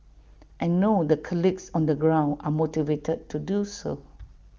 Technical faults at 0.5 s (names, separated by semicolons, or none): none